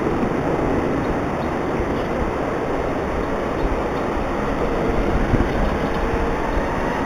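Imaging from linear upsampling runs throughout. The sound points to an 8 kHz original raised to 44.1 kHz by straight-line interpolation, a weak filter. Its top end is dulled, and a faint mirror image sits between 4 and 8 kHz, roughly 30 dB down, adding a slight metallic shimmer.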